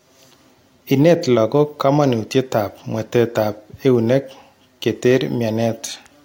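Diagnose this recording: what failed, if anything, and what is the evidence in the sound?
Nothing in the signal chain appears to have failed: the speech holds a continuous waveform with no gaps, discontinuities, distortion or timing irregularities at any stage from capture to playback.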